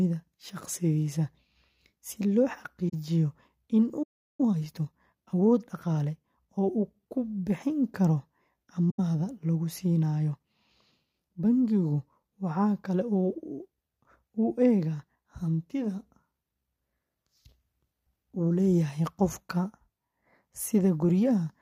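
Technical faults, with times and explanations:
2.89 s and 8.90 s, AAC frame loss with muting: the speech fades to silence for 43 ms, then for 85 ms, which fits two and four lost frames whose spectrum was zeroed. Overlapping windows soften both edges.
4.02 to 4.41 s, playback stall: the speech halts mid-flow for 0.36 s of flat silence, likely because the player ran out of data or was blocked. It is longer than the frame-loss holes.
4.41 to 6.81 s, time-compressed catch-up: right after the stall the speech runs 1.15 times faster at its normal pitch. Small pieces are cut out and cross-faded to clear the backlog, which is why pitch does not rise as it would with resampling.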